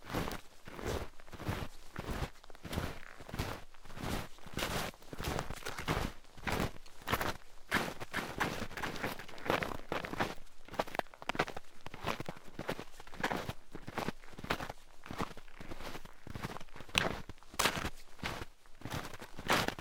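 A slower capture path likely mixes the sound in twice from 7.90 to 10.46 s. This doubled audio track adds a dry copy, roughly 5 dB quieter, trailing about 0.4 s behind.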